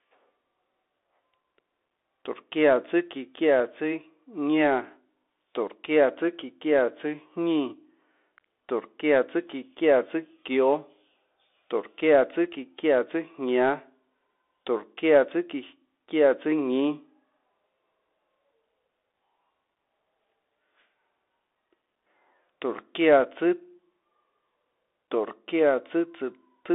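From start to finish the speech passes through a Bluetooth CVSD headset codec, which fits a 64 kbps link coding each sample as a single up-or-down bit with an adapting step. The line band runs about 300 Hz to 3.6 kHz, and nothing above 3.8 kHz survives, leaving the speech thin and muffled. The coding damage is plainly audible: fast, loud high-frequency movements outrun the step, so s sounds turn scratchy and a granular hiss lies beneath the speech.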